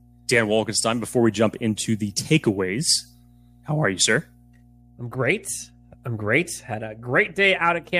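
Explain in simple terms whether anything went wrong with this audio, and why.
A low, steady buzz runs under the speech for the whole clip, from the first second to the last. This is mains hum. The recording picked up the electricity supply, through a ground loop or a nearby transformer. Here the hum sits at 60 Hz, a deep drone. It stays well below the speech, so it never drowns it out. But it never stops, and it is easiest to notice in the pauses.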